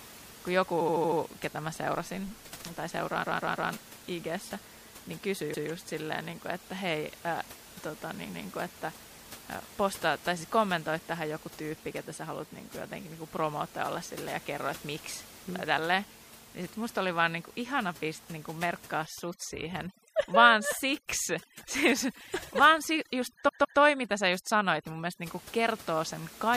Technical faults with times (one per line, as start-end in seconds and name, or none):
0.00-26.57 MP3 compression
0.80-1.19 repeated frames
3.23-3.70 repeated frames
5.53-5.68 repeated frames
19.06-25.23 overdone noise removal
23.47-23.79 repeated frames